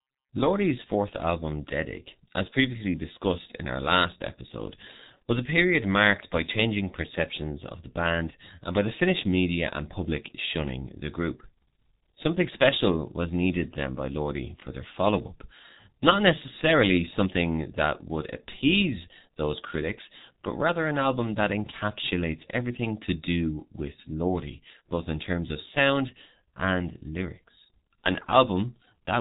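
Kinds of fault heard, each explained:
G.723.1 codec, throughout: a slow-updating low-rate voice coder removes everything above 3.8 kHz, and heavy damage leaves the speech muffled and hoarse, consistent with about 6.3 kbit/s.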